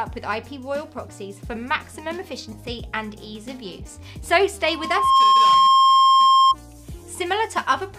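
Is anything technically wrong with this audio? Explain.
Yes. From 4.64 s to 6.56 s there is a loudspeaker feedback squeal: a single tone at 1.1 kHz that swells over roughly half a second until it sits about 15 dB above the rest of the sound. The microphone is picking up the loudspeaker it feeds, and at that frequency the loop gain exceeds one, so the tone keeps feeding itself. Unlike a steady interference whistle, it starts quietly and grows on its own before it stops.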